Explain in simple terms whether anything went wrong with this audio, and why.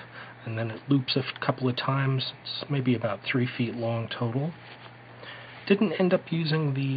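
Nothing went wrong here that I can hear: the audio stays steady the whole way, with no glitches, dropouts or odd noises to point to.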